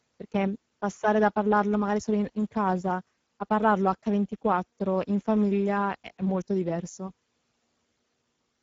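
Speex codec damage runs through the whole speech clip: the CELP coder has too few bits to model the excitation, giving a plainly audible grainy, hoarse roughness, which fits a low bitrate near 10 kbps, and nothing reaches above 7.7 kHz.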